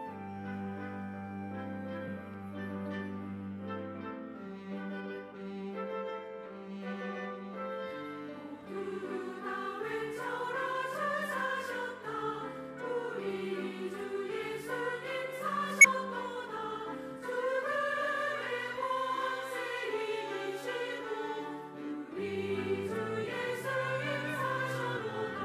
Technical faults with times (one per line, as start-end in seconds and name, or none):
5.31-5.34 compressed frames skipped
15.81-15.86 compressed frames skipped
24.96-24.99 compressed frames skipped